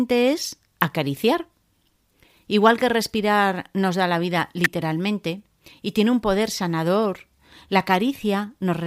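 At 0.81 s a sharp, isolated snap sits on top of the speech, peaking at around -10 dBFS. A second, louder one follows at 4.64 s, just after "nos da la vida", reaching close to -5 dBFS as a tight burst of clicks. Both are electrical switching spikes, most likely a nearby switch or static discharge arcing briefly and coupling into the audio line, adding energy over the speech without disturbing it.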